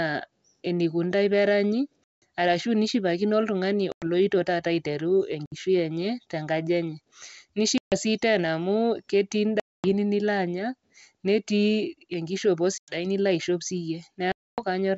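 Packet loss on an ADPCM call cuts hard-edged holes into the speech at 2.04, 3.92, 5.46, 7.78, 9.60, 12.78 and 14.32 s. The lost stretches range from 60 ms up to 260 ms. Each gap is dead silence, seen as a flat line in the waveform and a blank vertical band in the spectrogram. The decoder's predictor and step size have drifted from the sender's, so the sound resumes slightly distorted before settling.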